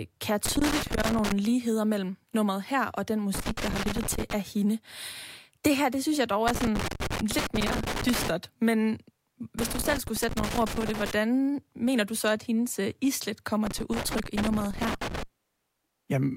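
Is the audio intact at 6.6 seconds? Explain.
No. Just after "det synes jeg dog", loose connector crackle runs from 6.48 to 8.28 s. A worn or dirty contact keeps making and breaking, chopping the speech signal and adding pops from any DC on the line, heard as irregular scratchy crackle bursts.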